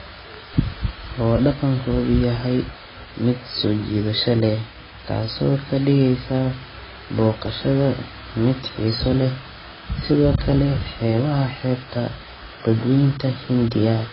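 From start to finish the speech sounds dull and smeared, with nothing above about 5.5 kHz, so the top end is simply gone. Sibilants and held sounds have a warbly, fizzy texture, and the damage is heavy. That's likely AAC compression, probably AAC-LC at a bitrate around 16 kbps. At that budget the encoder drops the high band entirely and quantises what's left so coarsely that the spectrum goes patchy and watery.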